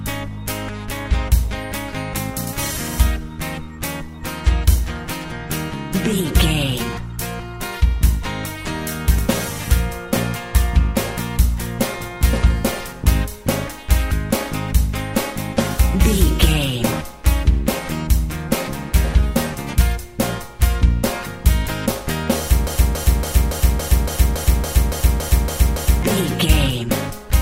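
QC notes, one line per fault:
22.67–26.03 s: broken-record loop. A 281 ms fragment repeats exactly, back to back, 12 times, giving a rigid rhythmic stutter for over three seconds, and the audio that should have played there is missing. Likely a stalled player or stream resending its last held fragment.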